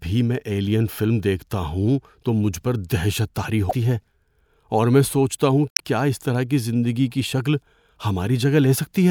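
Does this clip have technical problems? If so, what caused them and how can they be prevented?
Yes, there's damaged data in a compressed stream: short glitches at 3.69–3.73 s, right after "مجھ پر دہشت طاری", and 5.70–5.80 s, between "اور میں سوچتا ہوں" and "کیا اس طرح کی". Corrupted bytes made the decoder misread frames and lose sync. Checksummed transfers and verified copies would prevent it.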